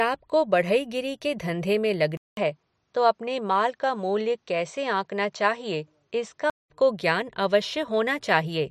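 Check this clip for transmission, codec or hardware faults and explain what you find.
One fault stands out: from 2.17 s to 6.70 s the input likely switched to a poorer device. Right after "बढ़ईगिरी के धंधे में", the system appears to drop to a different microphone or headset path, with a 200 ms silence at the changeover. That device passes nothing above 8.4 kHz, so the speech loses its top end and sounds duller, and it adds its own background noise well below the speech. Level stays about the same, and the fuller sound returns at 6.70 s.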